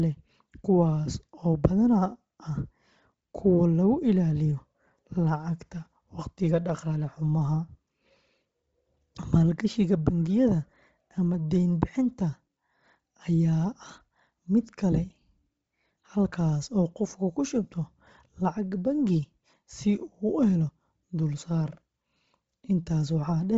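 Speech with Bluetooth LC3 compression throughout: the sound stops sharply around 7.8 kHz and the remaining top end has a breathy, grainy hiss instead of real detail. The likely cause is a low-rate LC3 link, which fits roughly 24 kbps with 7.5 ms frames, zeroing upper bands and filling them with noise. A plain low-pass filter would be dull but clean, and MP3 would add swirly, watery smearing rather than this noisy fill.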